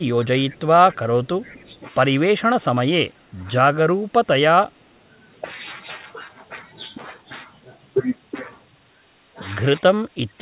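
From 0.0 to 1.71 s the voice dips repeatedly, by about 15 dB at worst and for around a second in total. This is speech suppressed in double talk, likely because the echo canceller turned the talker down while the far side was speaking.

Overlapping that stretch, faint delayed copies of the voice surface at 0.54–0.6 s and 1.64–1.77 s. This is echo leak, likely residual loudspeaker pickup that the canceller missed. Each copy lags the voice by 252 ms and sits about 40 dB and about 35 dB below it. That steady lag sets it apart from room reverberation, which would trail the voice continuously.

The same double-talk suppression returns at 3.02–3.43 s with a drop of about 20 dB, at 3.85–4.28 s with about 10 dB, and at 9.98–10.41 s with about 20 dB. All of it is heard through the G.711 path's band limit at 4 kHz.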